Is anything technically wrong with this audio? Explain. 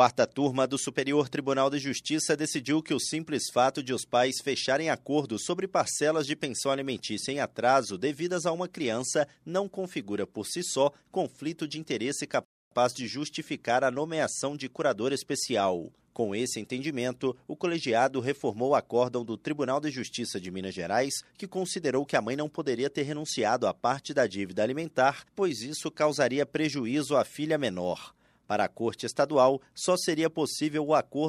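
Yes. A rebuffering stall occurs from 12.45 s to 12.71 s in this speech recording. The playback buffer emptied before the next portion of audio had downloaded, so the player halted and waited for data instead of continuing. The speech drops abruptly into silence for 265 ms, then picks up at exactly the point where it broke off. No audio is skipped; the pause simply stretches the timeline by that quarter-second gap.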